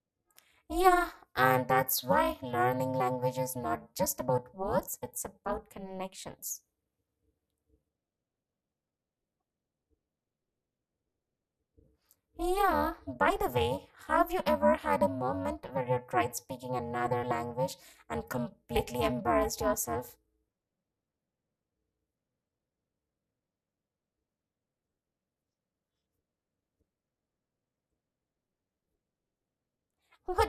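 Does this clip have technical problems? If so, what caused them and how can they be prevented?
Yes. Overlap-add ripple runs through the whole speech clip: the level dips by about 60 dB once per frame, at around 400 Hz, giving a harsh robotic buzz. Frames were windowed and rejoined with an overlap that doesn't sum to constant gain. Choose window and hop pairs satisfying the constant-overlap-add condition.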